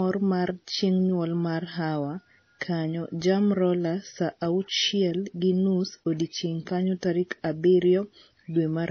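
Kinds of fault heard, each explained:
Transcoding between lossy codecs: dull speech with nothing above 6.5 kHz and layered artefacts, likely from a low-rate AAC encode re-encoded to MP3.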